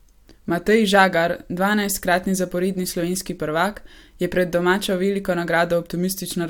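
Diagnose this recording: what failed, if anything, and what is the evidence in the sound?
Nothing in the chain from capture to playback has failed: the speech signal arrives continuous and intact, with no audible sign of trouble at any stage.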